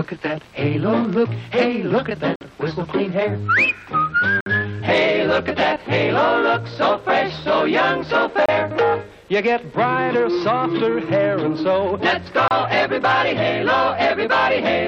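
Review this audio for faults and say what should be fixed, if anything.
There are four gaps between stream segments, heard as hard-edged dropouts to silence at 2.36–2.41 s (about 52 ms), 4.41–4.46 s (57 ms), 8.46–8.49 s (29 ms) and 12.48–12.51 s (30 ms). They fall on the boundaries of 2-second segments. Where one segment's timestamps end short of the next segment's start, the player inserts silence, so no audio is removed but the timeline is stretched. To prevent this, make each segment's timestamps continue exactly from the previous segment's end.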